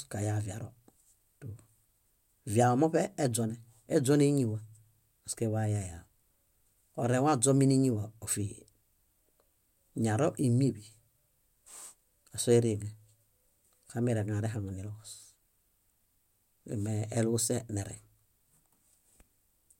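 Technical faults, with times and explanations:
No technical faults detected.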